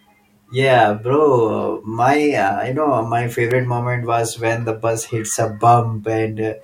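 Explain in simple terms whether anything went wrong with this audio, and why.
At about 3.51 s there's a sharp little snap, right between "know my" and "moment was when the". That's an electrical switching spike. It's very brief, just a few thousandths of a second, and fairly loud. The likely cause is something nearby, like a light switch, a motor kicking on or a static discharge, sending a tiny arc that the audio cable picked up.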